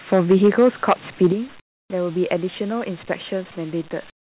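From 0.12 to 0.93 s and again at 1.22 to 1.27 s, the loudest speech turns harsh and crackly, likely microphone overload. Peaks run about 8 dB and then about 2 dB past the converter's limit, so a few percent and then roughly a tenth of samples are flat-topped. The waveform shows squared-off crests, and the spectrogram shows splattered energy up to the 4 kHz ceiling of the G.711 call path.

The level drops abruptly at 0.32 s by about 2 dB, at 1.32 s by about 8 dB and at 3.36 s by about 1 dB. This is likely the microphone volume being stepped down after the clipping. Each drop appears as a clean step in the waveform envelope, with voice and background lowered together.

From 1.6 to 1.9 s and from 4.1 s to the end, the real background gives way to smooth, featureless hiss about 20 dB and then about 18 dB quieter. This is likely comfort noise in place of the background, generated by the receiver during silences instead of transmitted. 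On the spectrogram it appears as a flat, uniform wash without the texture of the surrounding background.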